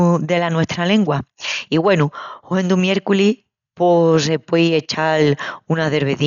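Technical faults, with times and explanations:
Throughout, Dolby Digital compression: speech sounds dull, with nothing above 6.9 kHz and rough, fluttering noise. A low-bitrate encoder starving frequency lines of bits is the likely cause.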